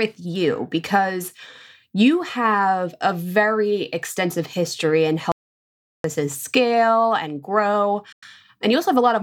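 At 5.32 s the speech cuts off abruptly and the gap that follows is silence, with no room tone underneath, until the sound returns mid-flow at 6.04 s. About 0.73 s of speech is simply missing. This is an audio dropout to silence: the input was likely lost for that stretch, through a disconnected device, a failed link or an accidental mute, while the recorder kept writing silence.

A shorter hole opens at 8.12 s and closes at 8.25 s, roughly a tenth of a second (98 ms), after which the speech carries on as though it had kept playing underneath. That behaviour points to a Bluetooth dropout, likely caused by audio packets reaching the headphones too late and being discarded. The output stays silent until good packets arrive, and a gap of this length fits about seven lost frames.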